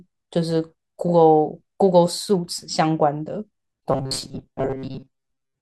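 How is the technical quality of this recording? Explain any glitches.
Robotic sound from repeated short buffers runs from 3.92 s to the end at 5.62 s. The likely cause is audio arriving too seldom, so a fragment of about 7.5 ms was looped over most of that stretch, imposing a rigid, metallic 133 Hz buzz.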